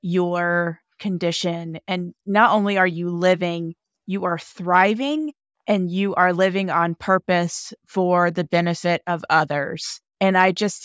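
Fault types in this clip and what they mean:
No technical faults can be heard anywhere in the speech. There is nothing to list for this clip.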